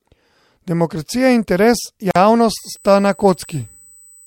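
At 2.11 s, right after "in interes", the speech drops out in a gap of about 46 ms, ending at 2.16 s. The edges are abrupt but slightly softened, and the speech resumes exactly where it stopped. This is a gap at a join of encoded pieces. The audio was encoded in separate segments and spliced without trimming, so one segment's end padding and the next segment's start-up delay both remain as dead air.

From 2.58 s to the end of the clip, a steady, thin whine at 8 kHz sits under the speech, roughly 30 dB below it. Its pitch never moves. This is USB whine. The bus's 125-microsecond microframe cycle draws current in regular pulses, and this ripple leaks into the analogue path through shared power or ground, producing a fixed tone at exactly that 8 kHz rate.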